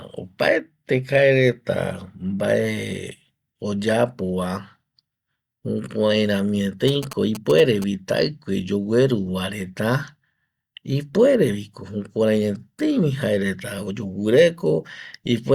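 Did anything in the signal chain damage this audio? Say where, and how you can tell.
Yes. GSM signalling bursts got into the analogue wiring between about 6.88 and 7.84 s: a galloping dit-dit-dit of short buzzes at a 216.7 Hz repetition rate, roughly 15 dB below the speech. A nearby 2G phone was signalling, and the analogue audio circuit rectified its radio pulses into audio. A spectrogram shows stacked harmonics of 217 Hz appearing in clumps, and the waveform shows short groups of spikes riding over the speech.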